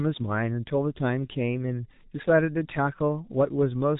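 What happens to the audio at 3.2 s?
At 3.2 s, as throughout, G.723.1 codec damage muffles and roughens the speech. Its coarse, slowly updated voice model, which fits about 6 kbit/s, blurs consonants. A spectrogram shows an empty band above 3.8 kHz.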